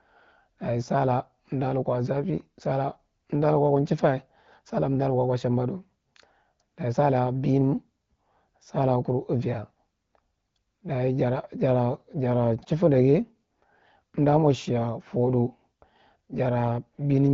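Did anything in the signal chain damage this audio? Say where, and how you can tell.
No, no stage in the chain has damaged this speech. The band stops at about 7 kHz with only light coding texture and the speech stays clear, which points to the AMR wideband (HD Voice) codec running at one of its higher rates, around 15.85 kbit/s.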